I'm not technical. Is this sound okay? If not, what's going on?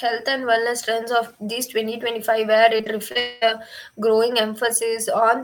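No, it isn't quite right. From about 2.77 to 3.17 seconds the speech turns choppy and robotic, with four small holes where tiny pieces go missing. This is repeated packet loss (robotic sound): the audio travels in small chunks over a network, some arrive late or not at all, and the receiver covers each hole by stretching the sound it just played. The longest hole is about 32 milliseconds.

Right after, from 3.19 to 3.43 seconds, there is a smeared, buzzy stretch, about a quarter of a second long, that never falls fully silent. What comes after picks up with that piece missing. The likely cause is a long network dropout: nothing arrived for that stretch, so the receiver kept drawing out the last sound to fill the gap, and that part of the speech was lost.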